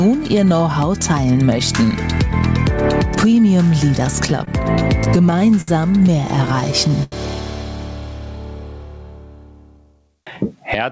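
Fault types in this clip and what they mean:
Gain pumping: the background swells in pauses and ducks around 20 dB under each loud sound, likely from excessive gain into a fast limiter; the level breathes rather than staying evenly squashed.
Repeated stalls (stutter): at 4.30–5.70 s and 6.46–7.14 s the sound briefly hangs and drags, with gaps up to 87 ms filled in. Unlike dropouts, nothing is lost.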